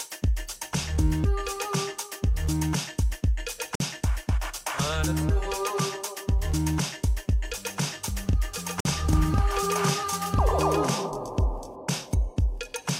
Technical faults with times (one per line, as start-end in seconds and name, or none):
3.75-3.80 gap between chunks
8.80-8.85 gap between chunks